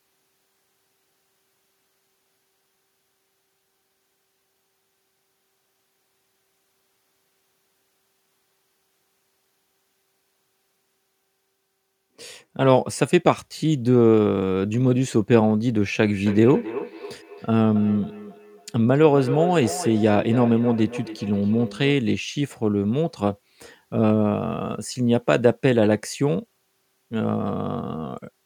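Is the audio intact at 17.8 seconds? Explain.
No, 17.8 s is inside feedback echo between two devices (16.02–22.08 s): another device replays the speech into the mic, giving thin, ringing repeats roughly every 0.3 s.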